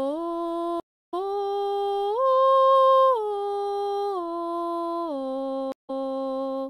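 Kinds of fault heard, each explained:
Stream reconnect: the connection dropped, so the player reconnected and restarted its decoder mid-stream. The music goes silent twice: for 324 ms near 0.8 s, resuming roughly 300 ms further on, and for 163 ms near 5.7 s, resuming 261 ms earlier.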